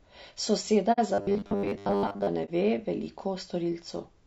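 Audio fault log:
throughout: low-delay AAC compression. The speech has a rough, grainy texture, with noise filling the gaps between pitch harmonics and a top band that sounds thin and partly synthetic. This is likely AAC-ELD coding at a low rate, with the damage fitting roughly 32 kbps. At this rate the bits are spread thinly across the codec's frequency lines, so the coarse quantisation becomes plainly audible.
0.92 s and 2.45 s: AAC frame loss with muting. The speech drops into a soft-edged silence of about 60 ms at 0.92 s, which points to two missing frames, and a brief dip of about 30 ms at 2.45 s, which points to one. The decoder zeroes the spectrum of each lost frame, and the overlapping windows taper the sound out and back in, so each gap has smooth edges.
1.14–2.28 s: robotic sound from repeated short buffers. The speech turns into a rigid, metallic buzz at a fixed 100 Hz that still roughly tracks the syllables. 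The likely cause is fresh audio arriving too seldom, so playback keeps looping the last stretch of about 10 ms while most of the real signal is skipped. Looping a 10 ms segment imposes exactly that 100 Hz pitch.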